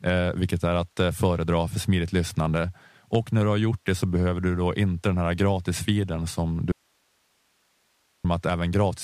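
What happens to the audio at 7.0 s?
At 7.0 s the speech is inside an audio dropout to a faint residue. It runs from 6.72 s to 8.25 s, about 1.53 s, starting right after "den här gratisfiden som". The signal cuts out abruptly in mid-flow rather than pausing or fading. Only low hiss remains, roughly 45 dB below the speech. The likely cause is a break in the wanted signal while the path after it stayed live and kept passing its own noise.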